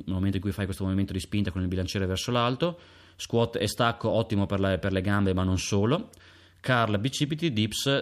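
Speech, with no technical faults to be heard.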